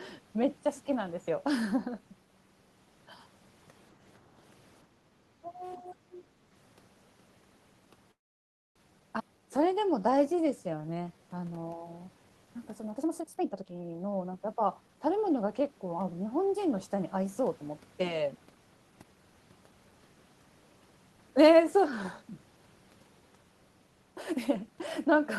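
At 4.86 s the background gated by the echo canceller appears. The room sound drops by about 8 dB until 5.13 s. The canceller heard the loudspeaker playing and pulled the microphone down hard. The gating lasts around a third of a second in total. It sounds like the ambience briefly ducking out. Then it comes back as the canceller releases.

From 5.41 to 6.37 s the speech is suppressed in double talk. The talker's level falls sharply, at its deepest by roughly 25 dB. About 0.7 s of the stretch is affected. This is likely the echo canceller mistaking the talker for loudspeaker echo while both sides spoke. It then turned everything down together.

At 8.11 s a call audio freeze begins and runs to 8.77 s. The receiver filled 641 ms in all. For 610 ms of that there is silence. The likely cause is packets held up in transit until the jitter buffer ran dry. When the audio resumes, it picks up exactly where it stopped. 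Nothing is lost. The freeze inserts a gap and adds 641 ms of delay.

Between 9.19 and 9.22 s the audio makes a skip ahead. Roughly 0.2 s of sound is dropped. The two sides are joined almost seamlessly, with only about 1 ms of fill. This is audio dropped while later packets were already waiting. It pulls the delay back by about 0.2 s. It is heard as an abrupt jump forward rather than a pause.

Right after, from 9.28 to 11.23 s, comes a jitter buffer slow-down. Playback runs at 89% speed while the pitch stays the same. The receiver repeated tiny slices of the waveform, one pitch period at a time, to rebuild its reserve. In total 213 ms is added. Sounds are drawn out.

From 12.9 to 15.68 s a jitter buffer speed-up follows. The speech runs at 123% speed, again at unchanged pitch. The buffer was holding more audio than its target. So the receiver trimmed short pieces of pitch periods, over and over. 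Roughly 0.7 s is removed across the stretch. The result sounds hurried.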